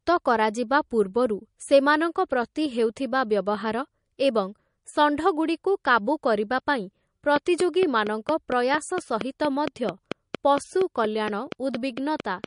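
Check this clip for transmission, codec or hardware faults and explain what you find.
Two faults stand out. The whole clip carries plainly audible codec damage from what's likely MP3 compression. Weak spectral detail switches on and off between frames, giving a watery texture, and nothing comes through above 10.6 kHz, which fits a bitrate around 40 kbps. From 7.36 s to 12.45 s there's a train of clicks, about twenty regular pops at 4.33 per second, peaking roughly 15 dB above the speech. It's likely interference from nearby equipment, or a faulty connection or power supply, injecting the same pulse repeatedly.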